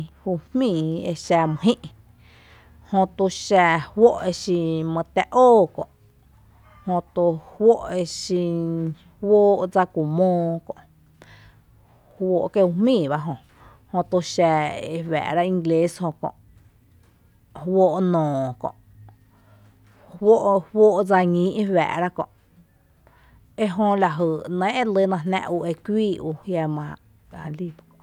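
No technical faults can be heard anywhere in the speech recording, and the signal holds steady from the first moment to the last.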